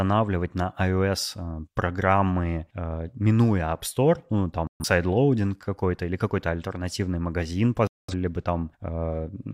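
Speech with two digital broadcast dropouts, where the receiver muted on missing or corrupt frames: 4.67–4.85 s, and 7.87–8.14 s just after "альтернативный магазин". About 128 ms and 213 ms of programme are lost, consistent with three and five dropped frames.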